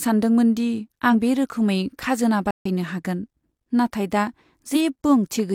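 A speech clip with two bursts of damaged data in a compressed stream, at 1.09–1.13 s after "सानदोंमोन दि" and 4.72–4.77 s after "नाथाय दा": the decoder loses sync and searches for the next frame header. A playback stall follows "बे रोखोमै खाजोना" at 2.51–2.66 s, a flat silent gap in the waveform of about 145 ms, likely from the player running short of data.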